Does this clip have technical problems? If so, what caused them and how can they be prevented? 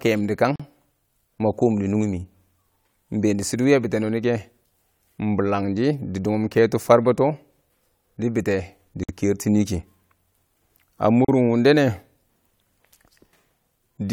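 Yes. There is a gap at a join of encoded pieces at 0.56, 9.03 and 11.25 s. Silences of 39, 52 and 37 ms break the speech, then it resumes. Each piece kept its encoder delay and end padding. Trim both before joining, or encode in one pass.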